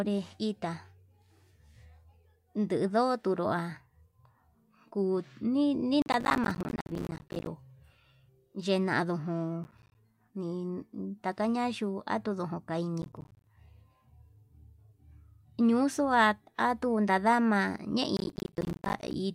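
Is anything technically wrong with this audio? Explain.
Yes. Processor overload crackle appears four times: 6.02 to 7.47 s, 9.64 to 9.95 s, 13.02 to 13.47 s, and 18.17 to 19.14 s. The processor misses buffer deadlines repeatedly, leaving short silent gaps that fit buffers of roughly 10 ms. The speech sounds gritty and torn.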